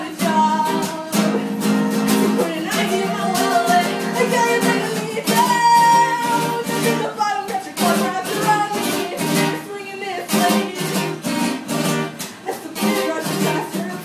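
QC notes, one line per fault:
No faults were found anywhere in the audio.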